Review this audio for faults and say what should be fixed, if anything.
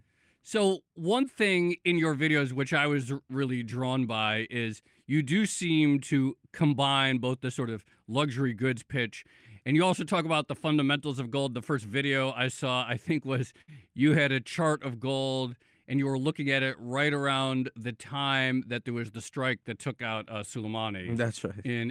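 A burst of packet loss runs from 13.61 to 13.72 s, between "saw I think was" and "you had a chart". Several consecutive packets failed to arrive in time, so the receiver continued the last received sound and faded it down for about 64 ms before the speech resumed further along. Roughly 60 ms of the speech never plays. A single lost packet would leave only a brief blip, but here the concealment is sustained and some speech is skipped. More network headroom or a deeper jitter buffer with forward error correction would prevent it.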